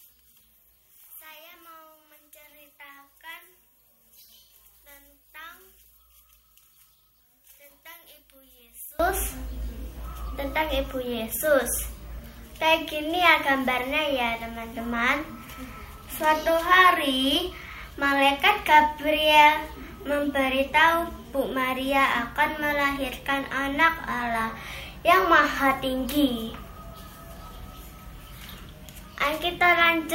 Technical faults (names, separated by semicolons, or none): one channel inverted